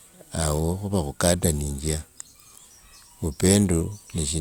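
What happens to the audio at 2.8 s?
Nothing goes wrong at 2.8 s; the speech plays through that moment intact, with no dropout, click or distortion.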